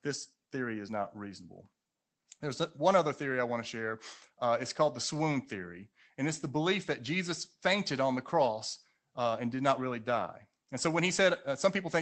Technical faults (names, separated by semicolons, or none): lost packet rebuilt from error correction